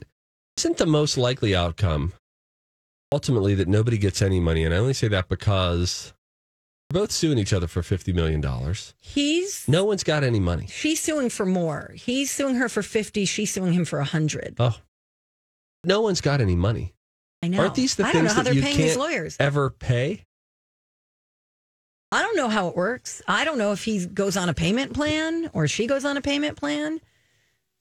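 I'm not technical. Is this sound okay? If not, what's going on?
No. This speech clip has a clipped start after a pause. After each silence, the playback device seems to doze off and needs a moment to wake, so the first 80 to 91 milliseconds of the next phrase go missing, at 0.49, 3.04, 6.82 (before "both suing each other"), 15.75, 17.34 (after "one's got any money") and 22.03 s (before "don't know how it"). The pauses also go fully quiet, but that alone is harmless. Here the opening sounds themselves are lost.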